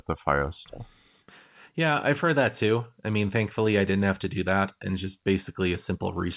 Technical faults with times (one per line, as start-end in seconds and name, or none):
none